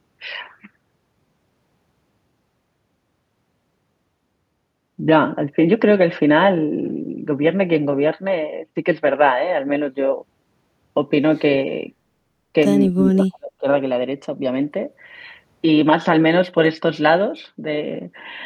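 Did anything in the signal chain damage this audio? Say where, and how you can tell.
Yes. From 12.92 to 13.66 s the speech drops out in patches, about 35 dB down: speech suppressed in double talk, likely from the echo canceller in call processing.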